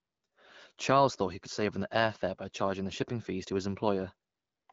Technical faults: none

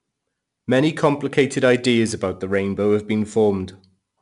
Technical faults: 4-bit ADPCM compression

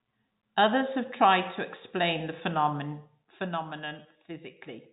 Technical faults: none

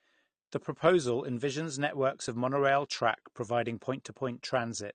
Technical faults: AAC compression

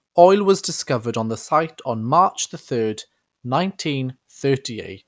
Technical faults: none

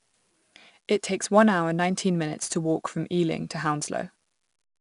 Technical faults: 4-bit ADPCM compression

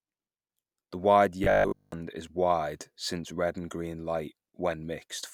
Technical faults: robotic sound from repeated short buffers

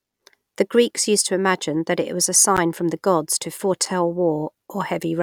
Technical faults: block of digital silence

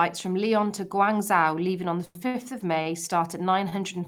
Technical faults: short stall from a late packet

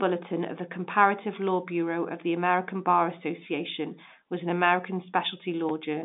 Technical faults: none

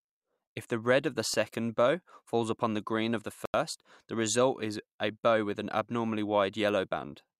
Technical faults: corrupt FLAC frame; corrupt frame muted

